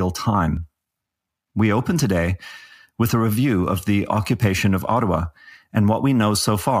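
At 0.57 s and again at 2.0 s the speech jumps ahead by about 10 ms, likely a dropped buffer (overrun) splicing both sides together.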